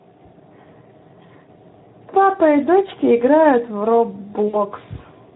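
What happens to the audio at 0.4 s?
Speex codec compression, consistent with about 11 kbps, starves the excitation of bits throughout the clip, so at 0.4 s the speech sounds noisy and hoarse.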